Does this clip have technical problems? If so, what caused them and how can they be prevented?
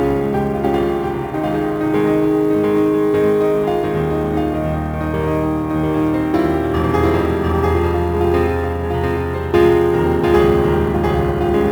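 Yes. A doubled audio track runs through the whole clip: a second full-band copy of the sound follows roughly 0.7 s behind the first at about the same level, with no decay or room colour. This is likely a second capture through a slower path or an edit holding two copies out of step. On a waveform every onset appears twice, about 0.7 s apart; on a spectrogram each event repeats as an identical, undimmed block. Prevent it by routing each source once and checking that no duplicate track or monitoring return is recorded.

Sample clock jitter is also present from start to finish. The converter's clock wanders by roughly 7 µs rms, so samples are taken slightly early or late. The error is largest where the waveform changes fastest, giving a hiss or roughness about 30 dB below the signal that rises with loud and high-frequency sound and disappears in silence. On a spectrogram it shows as a broadband haze that follows louder, brighter passages and clears in gaps. 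Prevent it by using a stable, low-jitter clock source or locking the converter to a clean reference.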